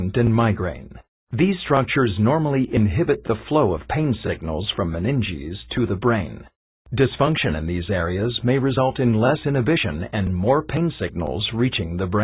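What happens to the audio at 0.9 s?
Nothing goes wrong at 0.9 s; the audio plays through that moment intact, with no dropout, click or distortion.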